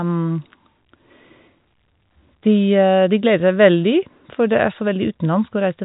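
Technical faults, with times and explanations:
Nothing here counts as a technical fault: the speech comes over the usual G.711 telephone coding, so there's nothing above about 3.8 kHz, just as a normal phone line sounds.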